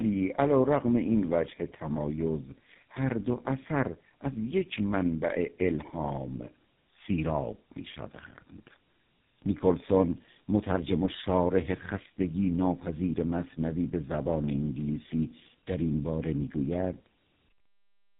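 Throughout, tandem speech coding: the speech was decoded and re-encoded by two low-rate speech codecs in a row, which fits an AMR-NB leg feeding GSM full rate. Each coder compounds the last's damage, so speech sounds rough, muffled and warbly, with nothing above 3.8 kHz.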